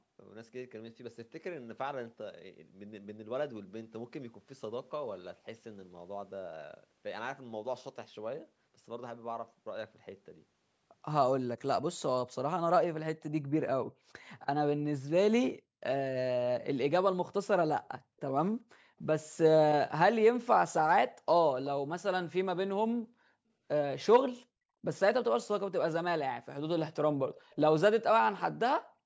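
Echo leak appears from 27.35 to 27.56 s in this speech recording: a faint, delayed copy of the talker returns about 377 ms behind the original, sitting very low, roughly 35 dB under the speech, and lasting only a fifth of a second. The likely cause is a far end playing the call on a loudspeaker, where the echo canceller failed to fully remove what its microphone picked up and sent that residue back down the line, in audio that stops at 8 kHz.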